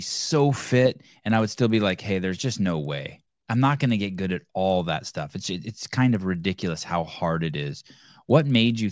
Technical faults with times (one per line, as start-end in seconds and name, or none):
0.00-8.91 resampler restarted on every block